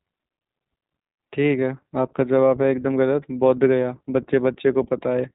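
Throughout, iLBC codec damage is plainly audible: nothing above 3.8 kHz, and a rough, synthetic grain from independently coded 20 ms frames, consistent with 15.2 kbps, unlike plain band-limiting.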